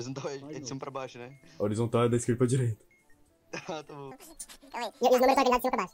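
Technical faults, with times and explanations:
4.11 to 5.94 s, audio read two samples at a time (double speed): from 4.11 s to the end, playback runs at twice the speed and a full 12 semitones higher, because the reader has taken each pair of consecutive samples as a single frame. That fits a mono stream being read as stereo, or samples being read at twice their real width. With every other sample dropped, any strong content above a quarter of the sample rate folds back into the audible band.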